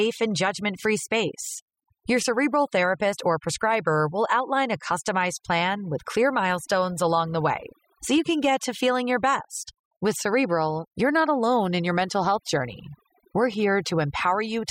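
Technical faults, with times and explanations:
Throughout, overdone noise removal: aggressive noise reduction gates frequency bands near the noise estimate, leaving near-silent gaps with twinkling specks. Quieter speech components vanish too.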